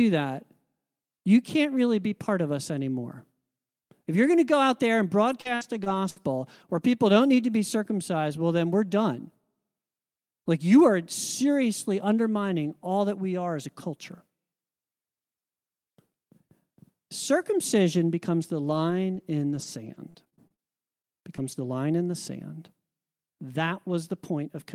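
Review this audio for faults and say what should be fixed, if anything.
Repeated packet loss (robotic sound) runs from 5.31 to 6.18 s. Four packet holes, the longest 63 ms, were each patched by stretching the preceding sound. About a fifth of that stretch is synthetic, so the audio turns choppy.

Scattered short gaps appear between 18.42 and 20.60 s. Roughly seven separate losses, none longer than about 40 ms, were individually concealed or rebuilt. They leave isolated ticks and smears in otherwise continuous speech.

Short concealed packet loss hits at 21.20–21.24 s and again at 21.36–21.40 s, just before "the line in the". Each hole of about 20 ms was filled by extrapolating the last sound, giving a brief smear or wobble.

A lost packet rebuilt from error correction occurs at 21.38–21.40, 21.44–21.46 and 21.52–21.54 s, again just before "the line in the". Each 20 ms frame came from a low-bitrate backup copy in the following packet, so nothing drops out, but those moments sound rougher and noisier.

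To prevent this, fix the unstable network path causing the losses, and give the receiver a deeper jitter buffer so late packets still arrive in time.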